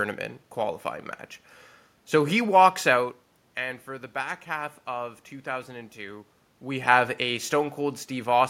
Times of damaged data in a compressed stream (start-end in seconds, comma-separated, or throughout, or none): none